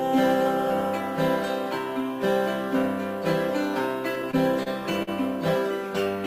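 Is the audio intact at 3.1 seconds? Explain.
Yes, the audio is intact at 3.1 seconds, with no fault present at that moment.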